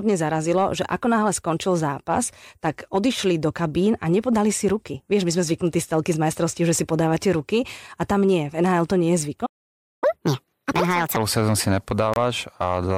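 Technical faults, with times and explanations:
9.46 to 10.04 s, playback stall: the speech cuts out mid-flow and the output sits silent for about 0.56 s before resuming. This is the signature of the player's output running dry, most likely from a buffer underrun or a blocked audio thread. The device keeps demanding samples, gets none, and emits silence until data flows again.
10.04 to 11.16 s, catch-up at higher speed: once output resumes, the speech runs at 1.5 times normal speed, with pitch raised by roughly seven semitones, a chipmunk-like lift. It ends just before "sezónu si". The player is draining its accumulated backlog by resampling rather than time-stretching. That is why speed and pitch rise together and then fall back to normal once the lost half-second has been recovered.
12.14 s, corrupt frame decoded: just after "sezónu si", a brief burst of misplaced energy lasts around 40 ms, roughly one codec frame. 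Damaged bits in that compressed frame were decoded as if valid. Misread scale factors or spectral codes then put energy at the wrong frequencies for the frame's duration, giving a short squeak or noise blip.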